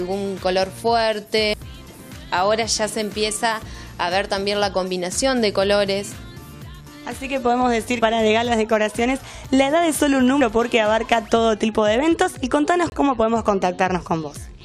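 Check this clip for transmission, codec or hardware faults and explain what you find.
Three kinds of fault can be heard: skips from dropped buffers, one brief glitch from a corrupt frame, and a short silent gap from muted frames.

At 1.54 s, 8.02 s and 10.41 s the sound jumps ahead with no silence, losing roughly 300 ms, 150 ms and 100 ms. This is likely a dropped buffer (overrun), where unread samples were overwritten and the two sides spliced together. The gap-free jump is what separates it from muting.

From 11.03 to 11.05 s a brief glitch appears. A corrupt frame was decoded, and the damaged data put energy at the wrong frequencies for about one frame. Here there is added sound rather than missing sound.

From 12.90 to 12.94 s the audio drops abruptly into a 40 ms hole, which fits two frames. This is a corrupt frame muted: the decoder rejected the damaged frames and silence replaced them. 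Unlike the overruns, timing is kept and nothing skips ahead.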